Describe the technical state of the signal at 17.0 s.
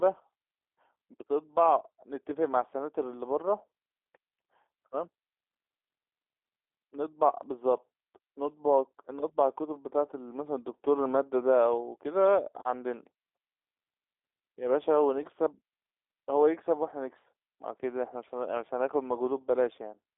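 At 17.0 s, as across the whole clip, the speech shows G.729 codec damage: it is confined to about 300 Hz to 3.6 kHz with nothing above 3.7 kHz. Its plainly rough, synthetic texture comes from sparse-pulse reconstruction, which fits an 8 kbit/s stream.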